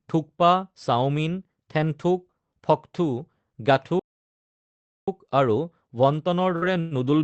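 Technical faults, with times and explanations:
3.99–5.08 s, playback stall: the speech halts mid-flow and the output goes silent for about 1.08 s before resuming, likely because the player ran short of data or its thread was blocked. The waveform shows a flat silent run, and the spectrogram shows a blank vertical band.
6.50–6.94 s, repeated packet loss (robotic sound): four gaps in under half a second, the longest 110 ms. About 174 ms is patched by stretching the preceding sound and 60 ms drops out entirely, giving choppy speech with pieces missing. The spectrogram shows smeared, repeated frames capped near 8 kHz.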